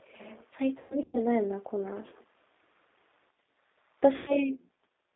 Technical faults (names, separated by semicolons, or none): G.729 codec; VoIP packet loss concealed by the speech codec